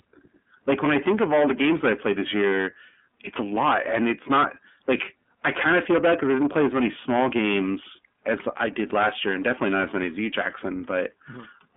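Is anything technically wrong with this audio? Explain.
Yes, two problems run through the whole speech clip.

The first is hard clipping. The signal is driven about 19 dB past what the chain can carry, so roughly a tenth of the samples get sliced flat. Those squared-off peaks throw harmonics way up high, so every loud syllable comes out as harsh fuzz.

The second is the iLBC codec. The audio sits in a telephone band of 200 Hz to 3.5 kHz with nothing above 3.7 kHz. Each frame's excitation is coded on its own, which fits iLBC's 30 ms, 13.33 kbps mode. The damage is plainly audible: muffled, slightly rough and synthetic.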